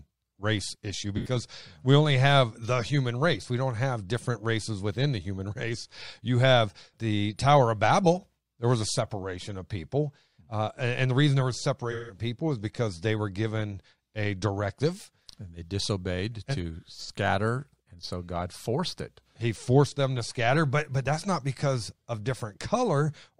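AAC frame loss with concealment occurs at 1.16–1.36 s, 11.91–12.19 s and 17.03–17.10 s, covering roughly 85, 171 and 43 ms. The decoder rebuilds each missing stretch from the last good spectrum, so the speech turns into a smeared, noisy, phasey blur instead of a clean silent gap.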